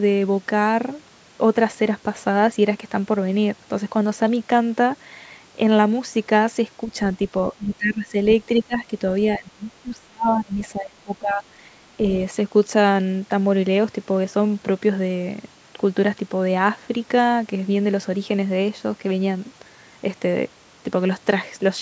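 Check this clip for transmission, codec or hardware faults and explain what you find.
The speech dips repeatedly between 7.5 and 11.5 s. Speech suppressed in double talk occurs at 7.52–8.15 s, 8.57–8.93 s and 9.37–11.45 s. The level drops by about 15 to 25 dB, likely from an echo canceller turning down both talkers while the far side spoke.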